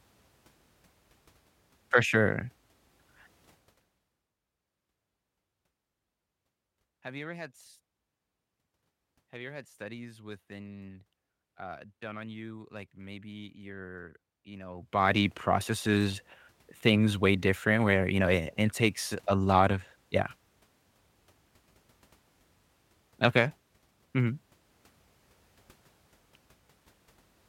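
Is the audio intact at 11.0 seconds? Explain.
Yes, the speech at 11.0 seconds is intact, with no fault at that moment.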